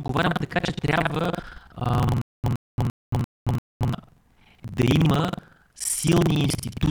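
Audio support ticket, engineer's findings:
Buffer tearing, throughout: writer and hardware read pointer slipped in the ring buffer, splicing roughly a third of each period from about 100 ms earlier. Constant 21.5 Hz robotic rattle on speech, which fits a 2048-sample buffer.

Stutter with silent gaps, 2.22–3.93 s: likely a player or stream stall with retries. A 118 ms fragment repeats five times, each followed by 224 ms of digital silence (342 ms period). The original audio for that span is lost.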